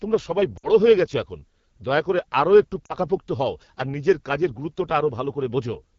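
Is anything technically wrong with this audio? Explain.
Yes. There are two problems.

The AMR wideband (HD Voice) codec is audible throughout. The speech sounds rough and raspy, which points to a low rate near 8.85 kbit/s. At that rate the vocal tract model and pulse excitation are too coarse to carry the voice cleanly.

Lost AMR speech frames occur at 0.58 to 0.68 s and 2.85 to 2.95 s. The first gap lasts about 60 ms, the second about 40 ms, which fits three and two 20 ms frames. The decoder repeats its last good settings with falling gain. Each gap is a quick fade to near silence before the voice returns weak.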